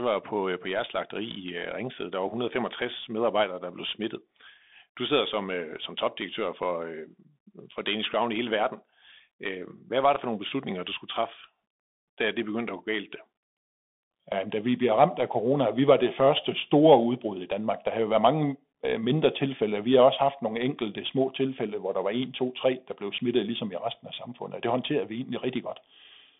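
Throughout, narrowband speech (200 Hz to 3.6 kHz) carries plainly audible granular hiss and scratchy s sounds, the mark of the Bluetooth CVSD headset codec's one-bit delta coding.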